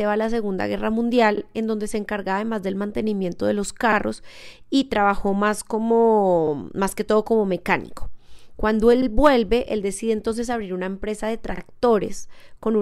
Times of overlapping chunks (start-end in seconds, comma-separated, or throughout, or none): 1.37-1.42, 3.92-3.97, 6.47-6.52, 9.02-9.07, 11.57-11.62